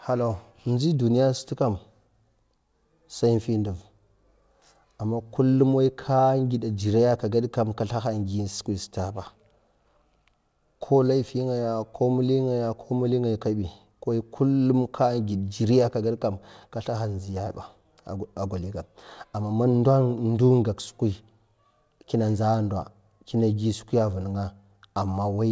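No technical faults are audible.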